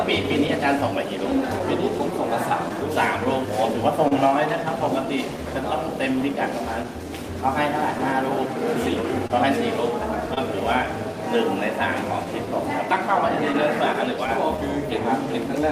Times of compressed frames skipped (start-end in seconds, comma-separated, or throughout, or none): none